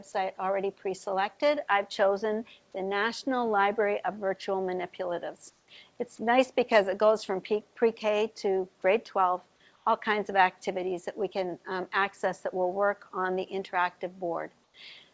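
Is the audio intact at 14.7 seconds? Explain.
No, there is comfort noise in place of the background from 14.64 to 14.74 s: a flat, featureless hiss about 4 dB quieter, likely discontinuous transmission filling the pause.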